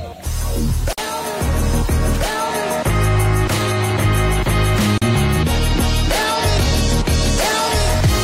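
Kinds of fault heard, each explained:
Gap at a join of encoded pieces: the sound drops out for about 49 ms at 0.93 s and about 40 ms at 4.98 s, roughly every 4 s, as if separately encoded pieces were butted together with each one's start-up delay and end padding left in. Unlike a dropout that loses material, the sound resumes exactly where it left off, nothing is skipped, and the edges are smeared by the codec.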